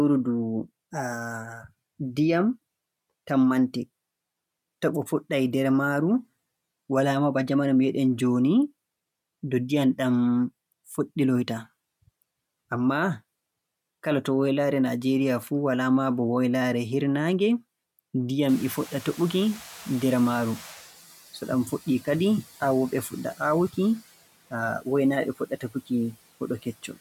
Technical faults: noise suppressor catching up; speech cut by the noise suppressor

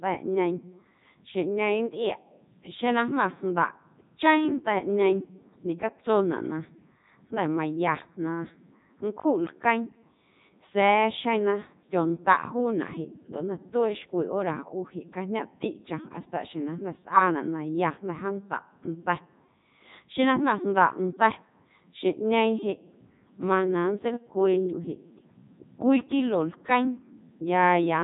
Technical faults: Codec 2 vocoder

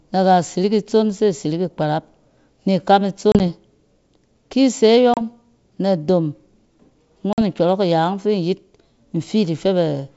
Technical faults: packet loss on an ADPCM call

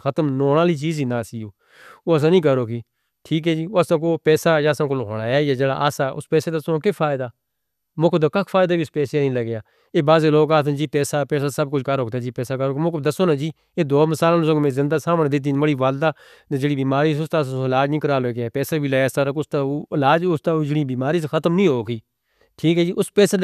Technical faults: none

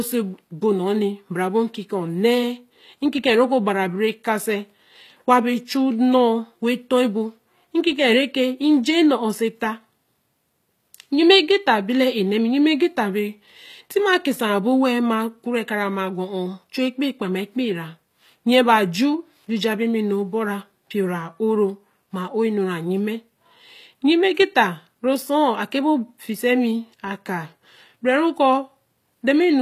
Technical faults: HE-AAC compression

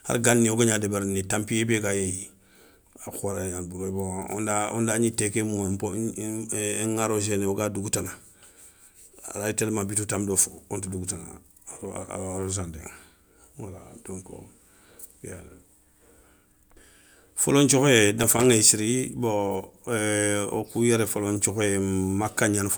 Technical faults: loose connector crackle

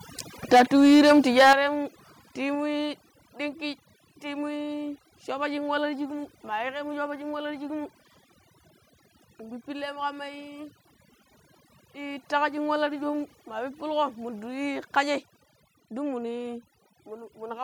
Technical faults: overdone noise removal; microphone overload; microphone volume stepped down

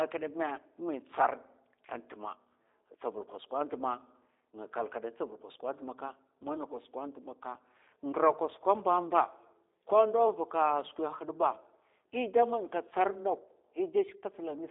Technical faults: G.729 codec

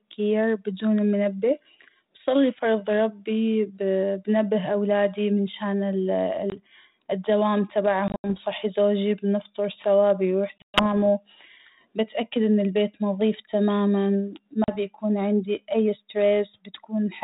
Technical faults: packet loss on an ADPCM call

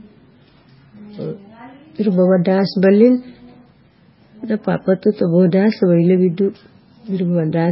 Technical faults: MP3 compression

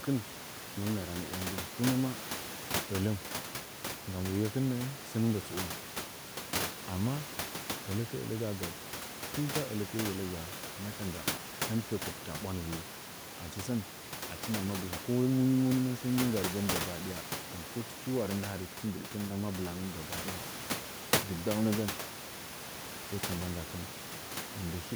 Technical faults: none

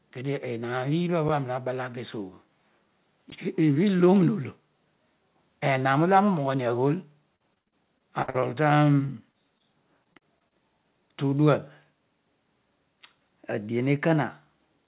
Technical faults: block of digital silence; repeated packet loss (robotic sound); short concealed packet loss

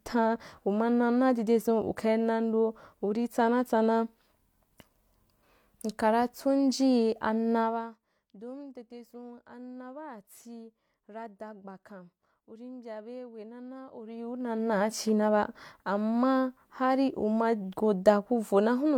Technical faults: zipper noise

